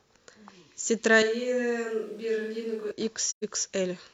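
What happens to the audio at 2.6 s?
At 2.6 s the speech is in a switch to a distant microphone (1.23 to 2.91 s), likely because the close pickup dropped out. It sounds hollow, roomy, thin and noisier, about 5 dB quieter. Unlike added reverb, it starts and ends abruptly.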